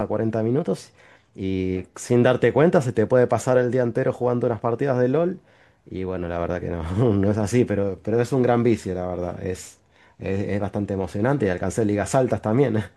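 From 0.56 to 1.41 s the speech runs about 5.3% fast and sits roughly 89 cents sharp, close to a semitone. Then it snaps back to normal pitch and pace. This is a drift correction step. Clock-matching software likely jumped the playback rate to drain its buffer.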